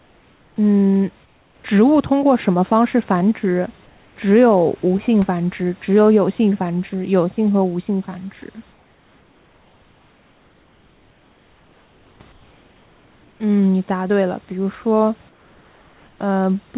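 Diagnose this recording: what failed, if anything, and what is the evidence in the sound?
Comfort noise in place of the background, at the call-processing stage. In the pauses at 0.0–0.56, 1.25–1.64, 3.86–4.16, 8.72–12.2, 12.32–13.4 and 15.29–16.19 s, the room noise turns flat and featureless, about 3 to 5 dB quieter. The likely cause is discontinuous transmission. The receiver synthesises noise until speech resumes.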